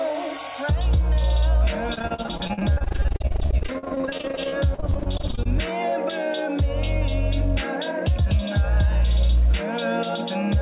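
The audio comes through a narrowband call path, with nothing above 4 kHz, which fits G.711. From 1.94 to 5.47 s there is repeated packet loss, giving a robotic sound. Dozens of short holes follow one another, the longest about 44 ms. Each is patched by stretching the last sound forward. About 37% of that stretch is concealed this way. The result is choppy, with pieces missing throughout.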